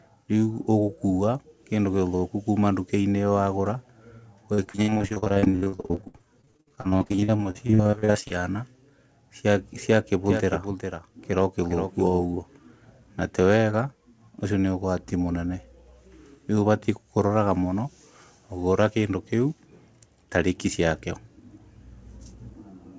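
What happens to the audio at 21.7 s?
Nothing goes wrong at 21.7 s: the speech there comes through intact, with only the normal band limit of the call path, which leaves nothing above 8 kHz.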